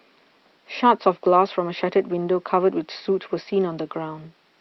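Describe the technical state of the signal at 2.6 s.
At 2.6 s the speech comes through intact, with only the low room noise about 44 dB beneath it and the ordinary band limit of the call codec near 12 kHz.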